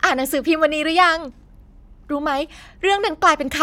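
Speech recording with no audible technical faults anywhere.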